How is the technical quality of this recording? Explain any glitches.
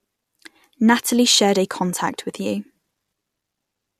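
Nothing here calls for explanation; I can't hear a single glitch, dropout or hiccup anywhere in the recording.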